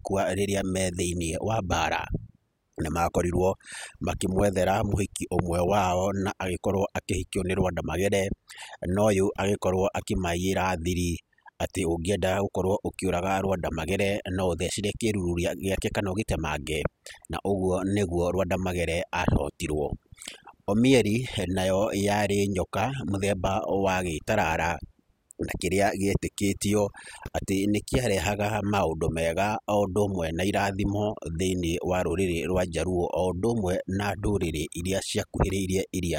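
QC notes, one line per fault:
Throughout: overdone noise removal. The noise reduction stage was pushed far too hard, so any frequency band sitting close to its picture of the background noise gets pulled down hard or shut off entirely, and the softer parts of the speech are cut away along with the noise. The background drops and breaks up into small twinkling specks.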